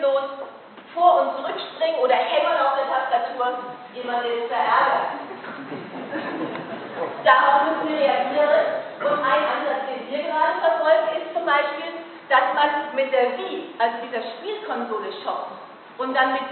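No technical faults can be heard anywhere in the audio, and the signal stays continuous throughout.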